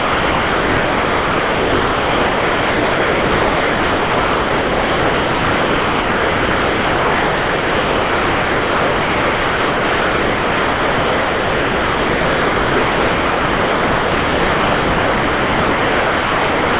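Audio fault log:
throughout: sound dropped by the voice detector. The sender's detector likely treated the entire signal as background and never transmitted it, so the receiver filled all 16.8 s with comfort noise. Only a steady, featureless hiss is heard, capped at 4 kHz by the G.711 call path.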